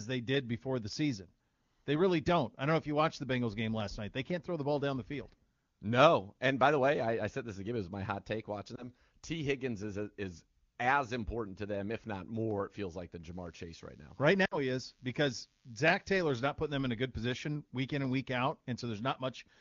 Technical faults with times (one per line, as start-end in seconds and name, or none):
8.75-8.85 lost AMR speech frames
13.33-16.08 DECT cordless phone buzz
14.45-14.58 lost AMR speech frames